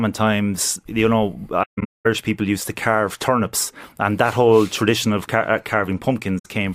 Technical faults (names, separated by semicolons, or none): AAC frame loss with muting